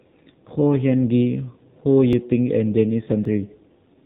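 Throughout, the speech carries the AMR narrowband mobile codec: nothing above 4 kHz, and a buzzy, synthetic edge that fits a low rate around 7.4 kbps. The damage is plainly audible and steady across the whole clip, unlike the brief events that follow.

At 2.13 s and again at 3.25 s there is a sudden forward jump in the sound, with no gap of silence. Each skips roughly 5 ms, likely a dropped buffer from an overrun, where unread samples were overwritten and the two sides were joined directly.

From 3.45 to 3.51 s, lost AMR speech frames remove 40 ms. The decoder fills the hole by reusing its last good settings at falling gain, so the sound smears and dips briefly rather than clicking, then returns rough for a moment.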